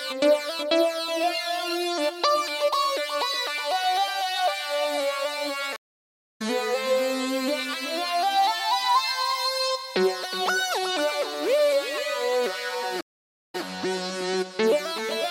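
At 5.76 s the audio drops out for about 0.59 s, a stream reconnect. The connection broke and a fresh decoder started mid-stream. Play resumes around half a second later, skipping material. At 13.01 s another reconnect silences 0.48 s, resuming 131 ms earlier.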